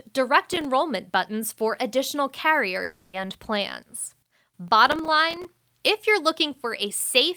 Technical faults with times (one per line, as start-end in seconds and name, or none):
0.42-0.65 processor overload crackle
2.83-3.16 long network dropout
4.68-5.45 processor overload crackle